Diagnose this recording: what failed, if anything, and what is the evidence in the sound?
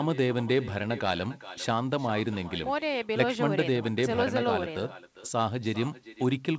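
An echo with no canceller runs through the whole speech clip: the far end's loudspeaker feeds its microphone and no echo cancellation removes it, so every phrase returns about 17 dB down, roughly 0.4 s later. It is a distinct delayed copy, not a smooth reverberant tail.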